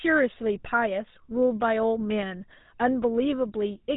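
From start to finish the speech carries the plainly audible damage of the GSM full-rate codec, at a data rate consistent with its 13 kbps. The codec models the vocal tract as a filter and excites it with a sparse, regularly spaced pulse train, discarding two of every three excitation samples. That coarse excitation gives the speech a buzzy, gravelly texture, and the band stops at about 3.8 kHz, leaving it dull and narrow.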